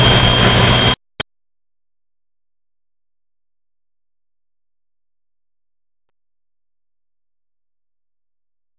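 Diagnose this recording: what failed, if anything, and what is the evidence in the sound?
Nothing has failed: the signal comes through the WebRTC call path intact, and the absence of anything above 4 kHz is simply the expected band limit of its G.711 A-law coding at 64 kbps.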